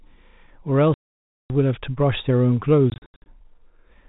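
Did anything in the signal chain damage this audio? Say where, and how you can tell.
Yes. It happened in the network stage, as packet loss filled with silence. Speech cuts to dead silence from 0.94 to 1.5 s. Scattered holes follow between 2.9 and 3.26 s, the longest about 80 ms. The gap lengths fit 20 ms packets replaced by silence.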